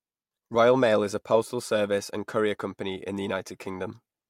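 Nothing in this speech recording stands out as a technical fault, so there's nothing to flag here.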